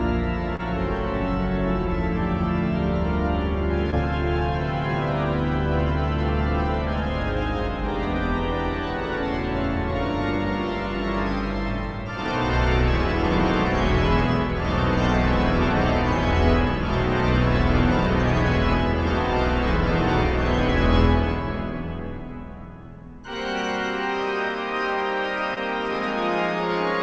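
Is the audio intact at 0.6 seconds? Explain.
No. Short concealed packet loss runs from 0.56 to 0.61 s. About 20 ms never arrived, so the receiver extended the previous sound, leaving a brief smear or wobble.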